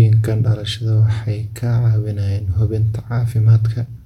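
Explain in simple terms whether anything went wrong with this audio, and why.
Nothing went wrong with this audio, as there is no audible fault anywhere in the speech.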